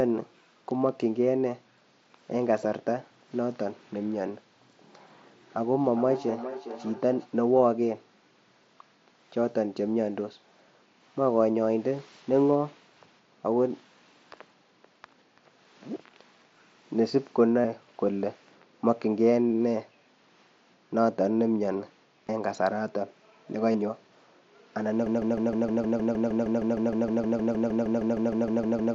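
Speech carried over a Bluetooth headset link, whose mSBC codec leaves a light graininess on louder sounds, shows three separate faults. From 5.68 to 7.3 s there is feedback echo between two devices: the sound returns at a steady interval of roughly 0.4 s, thinner and more ringing with each pass, peaking at about 12 dB below the direct speech. One device plays the other's microphone signal into the room, that microphone picks it up again, and neither echo canceller catches it because each only removes its own playback. A single room reflection would not repeat at a fixed spacing like this. Concealed Bluetooth headset packet loss occurs at 17.61 to 17.65 s (37.5 ms), at 22.27 s (15 ms) and at 23.72 to 23.74 s (22.5 ms). Each gap is filled by repeating a recent stretch of waveform, so it comes out as a brief buzzy, tonal patch with a slight warble as real audio resumes, rather than a silent dropout or a click. 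From 25.06 s to the end a broken-record loop takes over: a 155 ms fragment repeats exactly, back to back, about 25 times, and the audio that should have followed is lost. The likely cause is a stalled player or stream resending its last buffer. Unlike the echo, each repeat is identical and undecayed, and it replaces the speech rather than trailing behind it.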